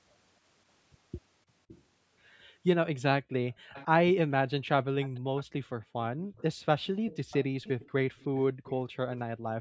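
At 1.68 to 1.82 s and 3.72 to 3.86 s, faint delayed copies of the speech appear, roughly 20 to 25 dB down and about 540 ms late. From 5.0 to 9.19 s, a sustained copy trails at about 560 ms. This is likely an echo leak from a far-end loudspeaker that the echo canceller did not fully remove. Unlike room reverberation, each copy is a distinct repeat of the speech, not a smooth decay.

Overlapping that stretch, the background is gated by the echo canceller at 5.79 to 6.31 s, 7.47 to 7.58 s and 8.52 to 9.46 s. The room sound falls by up to about 40 dB, and by about 23 dB in the middle event, then returns. These are brief, fractional-second dips, which distinguishes them from noise suppression pumping, because they follow the echo activity.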